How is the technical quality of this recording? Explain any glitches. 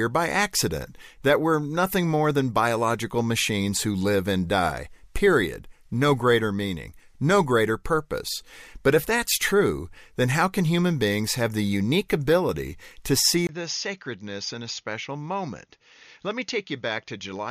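One glitch affects the last few seconds. At 13.47 s, just after "unique ability to see", the input likely switched to a poorer device. A 20 ms gap follows, and from there to the end, the speech loses everything above 6.8 kHz, drops about 10 dB, sounds duller and boxier, and sits over a faint new background noise.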